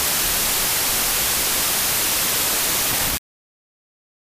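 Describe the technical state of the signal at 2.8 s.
At 2.8 s the signal is affected by a wrong sample width, present across the whole clip. The behaviour points to packed 24-bit samples being read as 16-bit, so sample boundaries fall between the original bytes. Many values are built from mismatched bytes, and only some keep the real signal's top bits. The result is dense noise with the original buried inside, playing at 0.667 times speed and correspondingly lower in pitch.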